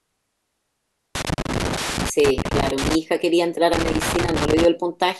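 An irregular burst of crackle and scratching breaks into the speech from 1.15 to 2.95 s, then returns from 3.73 to 4.65 s. Both are loose connector crackle. A worn or dirty contact in the signal path is shifting, making and breaking the circuit many times in quick succession. Each break chops the signal, and any DC sitting on the line turns every reconnection into a small pop, which produces the rough, uneven texture heard in both bursts.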